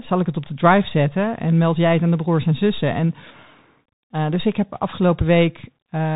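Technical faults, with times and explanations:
Throughout, Bluetooth CVSD headset codec: the speech is squeezed into a narrowband headset link, with nothing above 3.8 kHz. Each sample is coded as a single up-or-down step at 64 kbps. The step size adapts too slowly, so loud high sounds distort, s sounds turn scratchy, and granular hiss sits underneath.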